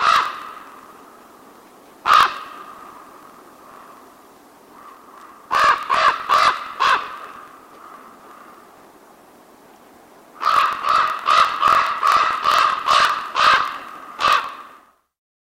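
From start to finish, a low buzz near 43.1 Hz runs through the sound, which plays 1.12 times fast with its timbre intact. This is a block size mismatch (truncated), with each block's tail discarded, which fits a 1024-sample read.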